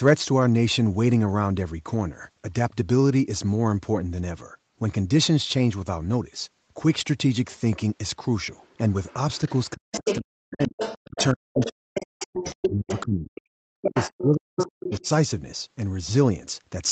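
Speech recorded over a call, band-limited with nothing above 8 kHz as expected from a wideband call codec, shows other side's voice leaking through in five places: 8.62–9.59 s at about 30 dB below the talker, 9.92–13.01 s at about 5 dB below, a brief scrap at 13.35–13.41 s around 20 dB down, then 13.83–14.24 s and 14.59–15.08 s, both near 5 dB below. The likely cause is loudspeaker playback reaching the microphone and not being fully removed by the echo canceller, so a second voice sits under the talker, strongest in the later stretches. Overlapping that, from 9.74 to 15.07 s, the talker's speech is suppressed in double talk. The talker dips and cuts out in pieces for roughly three seconds in total, with the deepest drops around 40 dB. This is most likely the canceller attenuating everything while both sides speak at once, taking the wanted voice down along with the echo.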